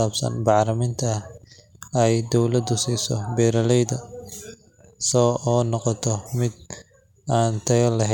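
Listening closely to the speech, nothing stood out as a technical fault at any point.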